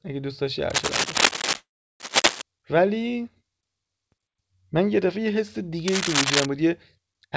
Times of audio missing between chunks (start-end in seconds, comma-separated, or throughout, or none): none